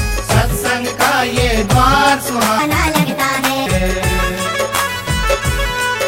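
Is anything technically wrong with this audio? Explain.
Yes, one fault. From 2.59 to 3.66 s a section at the wrong speed runs 1.46 times too fast, likely from resampling to the wrong clock. It sounds hurried and about seven semitones higher. Because tempo and pitch rise together, it is not a pitch shift alone.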